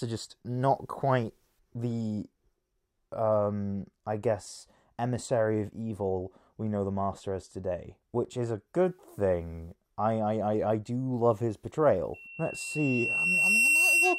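The audio runs cleanly until about 12.14 s, when loudspeaker feedback squeal kicks in and carries on right to the end of the clip at 14.19 s. It's a single tone at 2.7 kHz that swells over roughly a second and a half and ends up sitting about 5 dB above the sound itself. The mic is hearing its own loudspeaker, and at that frequency the loop gain tips past one, so the tone just keeps feeding itself.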